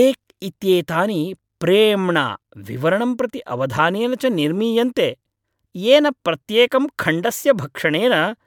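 No technical faults can be heard anywhere in the recorded speech. There is nothing to mark at any point in the clip.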